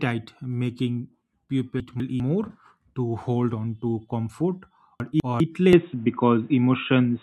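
Speech, with two faults. Chunks out of order appear twice, from 1.8 to 2.2 s and from 5.0 to 5.4 s. In each case a 200 ms block of audio plays one slot late, after the block that should follow it. No material is lost, but the sequence is scrambled, and the three hard joins around the swapped pair produce a brief jumbled stretch. From 5.73 s to the end, the sound abruptly turns duller and boxier, with nothing above 3.8 kHz, a level shift of about 5 dB, and a new background noise floor roughly 40 dB under the signal. There is no gap at the transition. This is likely the input switched to a poorer device, such as a second microphone or a headset running its narrowband call profile, with its own tone, gain and noise.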